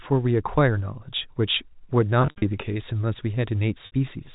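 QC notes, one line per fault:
2.22–2.42 s, packet loss with pitch repetition: about 140 ms of audio is missing, scattered over a 200 ms stretch, with the longest continuous gap 60 ms. The gaps fit 20 ms packets. Each gap is filled by repeating the last pitch period, so the sound briefly holds on a buzzy, static tone before it returns.
3.86–3.92 s, packet loss with pitch repetition: a single 60 ms gap is bridged the same way. It is heard as a short held, buzzy hold over the narrowband telephone-coded audio.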